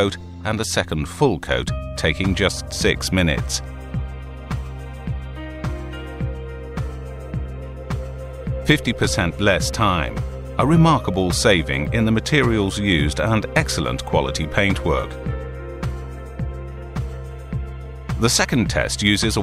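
Nothing in the audio stood out as a problem on listening.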